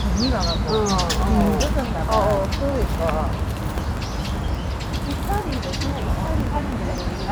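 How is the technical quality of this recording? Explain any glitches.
The recording has one clear fault. From 1.09 s to 7.24 s, periodic USB or driver dropouts occur every 0.064 s, about a hundred in all. Each time, a background task stalls the audio path. About a millisecond drops to silence. The result is a steady ticking over the sound.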